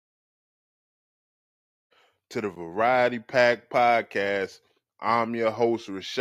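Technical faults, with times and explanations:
No technical faults are audible.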